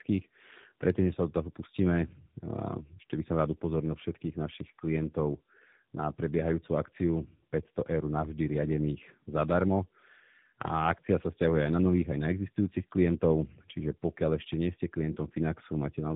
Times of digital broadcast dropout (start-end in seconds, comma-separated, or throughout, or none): none